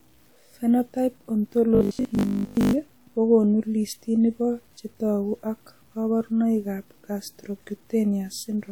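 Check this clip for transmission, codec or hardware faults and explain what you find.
Two faults are audible in this speech clip, one running throughout and one confined to about a second near the start.

Low bit depth without dither affects the whole clip. The sound carries a grainy distortion that tracks the speech, with the error sitting roughly 40 dB below the signal. This is likely from truncating the audio to about 9 bits with no dither. On a waveform, quiet stretches look stepped rather than smooth. A spectrogram shows a broadband grainy floor that rises and falls with the speech.

Robotic sound from repeated short buffers runs from 1.75 to 2.73 s. A rigid, metallic 50 Hz buzz follows the speech only roughly, and most of the audio in that span is repeats. This likely comes from the last 20 ms being replayed whenever new audio arrived late. The waveform shows identical 20 ms cycles back to back. 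A spectrogram shows vertical striations every 20 ms and harmonic lines spaced 50 Hz apart.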